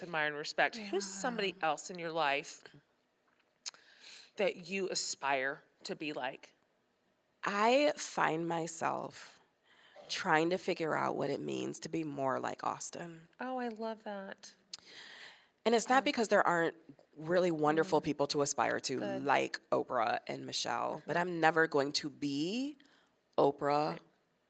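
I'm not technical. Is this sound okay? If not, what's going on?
Yes, this speech sounds fine, and nothing stood out as a problem on listening.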